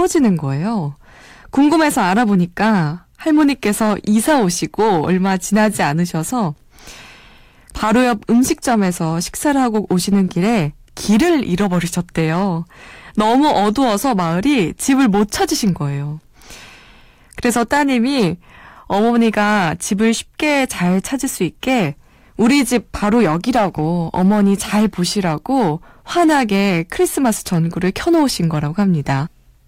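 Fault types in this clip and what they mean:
Hard clipping: The louder stretches of speech carry a gritty crackle on their peaks, a brittle edge that comes and goes with emphasis throughout the clip rather than a constant fuzz. The signal is driven about 5 dB past what the stage can pass, so the tops of the waveform are sliced flat, affecting only a small share of samples, around one in twenty-five. Those squared-off peaks add high harmonics that produce the harshness.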